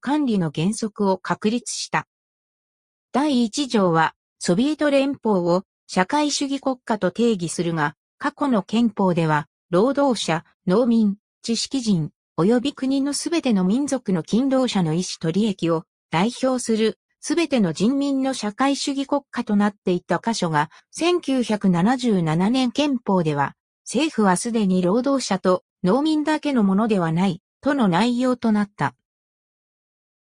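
No technical faults are audible anywhere in the recording.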